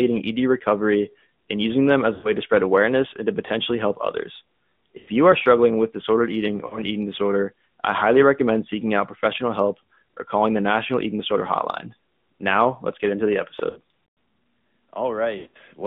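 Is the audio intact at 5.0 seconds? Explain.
No. Between 4.98 and 5.10 s, just after "to potentially help others" and before "you are struggling with", there are lost AMR speech frames. Radio errors corrupted a run of frames, so the decoder filled the gap by repeating its last good pitch and vocal tract settings while lowering the gain. The missing span is 100 ms, which fits about five 20 ms frames. The speech smears into a drawn-out, fading tone, and it returns weak or rough for a moment.

The whole clip, including this moment, has also passed through the AMR narrowband mobile codec. Narrowband sampling removes everything above 4 kHz, and the line passes only roughly 150 Hz to 3.6 kHz, and the coarseness suggests a rate near 10.2 kbps. Around the dropout, the speech sounds muffled, thin and plainly buzzy, with a synthetic edge.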